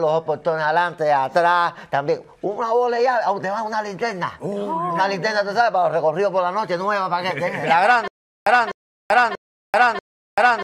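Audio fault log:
8.08 s to the end: stutter with silent gaps. From 8.08 s the same roughly 0.25 s snippet plays four times, each followed by about 0.39 s of dead digital silence, so it ticks over at a steady 0.64 s cycle until the clip runs out. That even burst-then-nothing rhythm most likely means the player or stream stalled and kept replaying its last buffered fragment on each retry. Whatever should have played there is simply gone.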